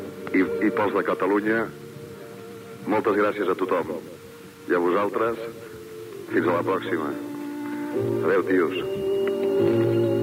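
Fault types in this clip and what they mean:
Low bit depth without dither: grainy distortion runs through the whole clip, only about 30 dB below the sound, likely from rounding to 7 bits with no dither. Unlike steady dithered hiss, this grit follows the signal, roughening quiet passages and collapsing the faintest into silence.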